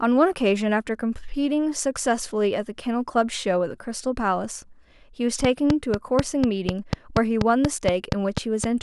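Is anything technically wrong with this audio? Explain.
Yes. From 5.45 to 8.65 s, a train of clicks ticks steadily about four times a second, around fifteen sharp pops roughly 20 dB above the speech, likely interference from nearby equipment.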